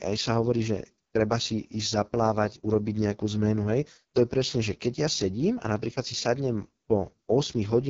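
The whole speech clip carries heavy AMR wideband (HD Voice) codec damage. Nothing reaches above 7.3 kHz. The raspy, rough texture fits the lowest 6.6 kbit/s mode. Too few bits remain for the pulse-driven vocal model, so consonants and vowels lose detail, and the top band is only shaped noise.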